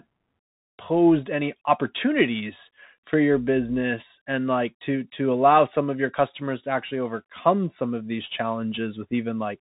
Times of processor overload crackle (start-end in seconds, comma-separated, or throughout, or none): none